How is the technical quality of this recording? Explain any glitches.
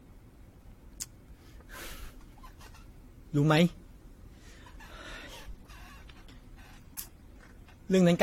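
The recording has audible, repeated lossy-coding damage throughout. Generation loss runs the full length of the speech: the sound is swirly, hollow and smeared, consonant attacks are blurred, and nothing remains above 16.8 kHz. The likely cause is repeated decoding and re-encoding, several passes that sound consistent with an AAC-LC chain near 64 kbit/s. Each pass quantises again on a shifted frame grid, so the holes and noise stack up beyond what one encode would leave.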